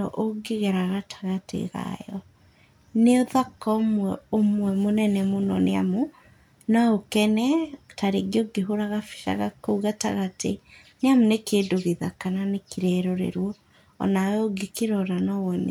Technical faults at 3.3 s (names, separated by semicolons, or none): none